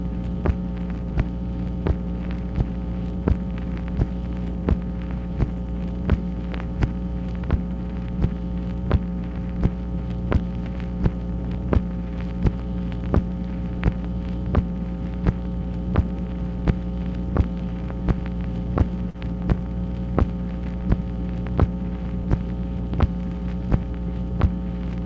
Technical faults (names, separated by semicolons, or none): short concealed packet loss